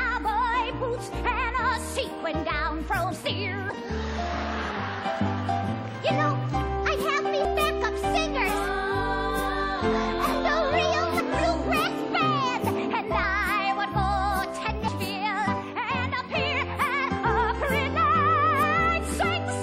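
At 3.1 s the audio jumps ahead by roughly 100 ms as compressed frames are skipped. The amount fits about five 23.2 ms codec frames. Overlapping frames blur the join into a short smeared blip, not a sharp click.

From 3.7 s, short sections vanish at 7.45, 11.2, 14.88 and 18.63 s. These are likely audio missing between chunks, about 300 ms lost each time, with the two sides butted together and no silence. The steady spacing of about 3.7 s separates them from the irregular frame skips.

At 13.22 s a second frame skip removes roughly 70 ms, about three frames. It has the same soft, smeared join and falls outside the regular chunk-boundary rhythm.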